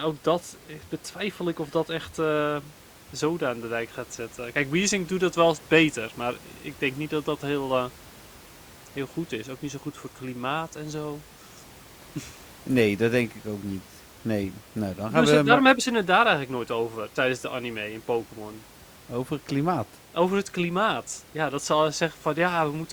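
No technical faults are audible.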